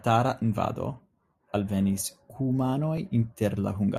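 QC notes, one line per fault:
0.98–3.97 s, clock drift buffer slips: A short click sounds about once per second, four times in all. Each click is a small jump in the waveform where a few dozen samples go missing or repeat. The likely cause is two devices on separate clocks drifting apart by roughly a thousand parts per million. The buffer between them slowly fills or drains, then slips a block. That steady drift explains the regular one-second spacing.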